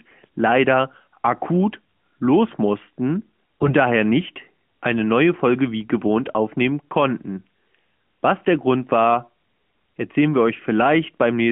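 From 3.61 to 3.74 s, between "leider akut los mussten" and "daher nicht eine neue", AMR bit errors turn the sound hoarse and gargly. A stretch of about 0.13 s fits roughly seven 20 ms frames carrying a few percent flipped bits. Pitch and level survive, but misplaced excitation pulses and skewed gain and spectral values leave smeared, noisy energy between broken harmonics on a spectrogram. That damage sits inside the AMR-NB band, which ends near 3.4 kHz, while the waveform envelope stays roughly intact.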